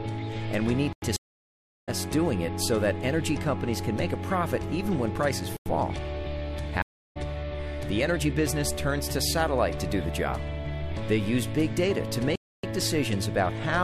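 At 0.93 s the audio drops into a block of digital silence lasting about 93 ms, which fits a 4096-sample buffer that was not filled in time. The same gap returns at 5.57 s, and a longer one of about 279 ms at 12.36 s. Each cuts to silence and back with no fade.

These holes differ from the stream reconnects at 1.16 s and 6.82 s. There the connection broke, the player sat silent for about 713 ms and then about 335 ms, and a fresh decoder restarted mid-stream. When the audio returns it has jumped ahead, by roughly 0.7 s the first time and 0.3 s the second, so material is missing rather than merely blanked.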